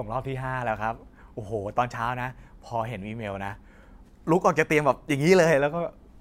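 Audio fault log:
No faults are heard anywhere in this speech recording. There is nothing to list against any time in the audio.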